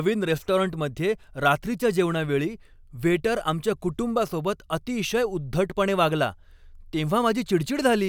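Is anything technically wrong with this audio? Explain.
No, nothing is technically wrong.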